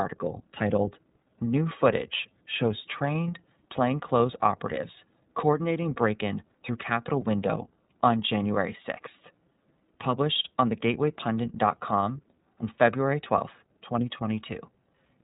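The speech passed through the iLBC codec end to end, its narrowband coding cutting everything above 3.8 kHz, leaving a dull, plainly rough, slightly synthetic texture consistent with 30 ms frames.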